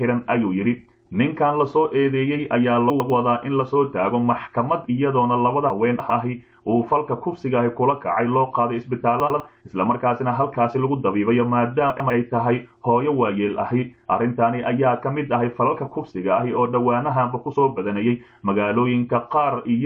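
The audio has chunks out of order at four points, 2.9 to 3.1 s, 5.7 to 6.1 s, 9.2 to 9.4 s and 11.9 to 12.1 s. Each is a 100 ms block delivered late and played after material that should follow it: one chunk late in three cases, three chunks late at 5.7 s. Nothing is missing, but the sequence jumps, giving a brief jumbled passage bounded by hard joins.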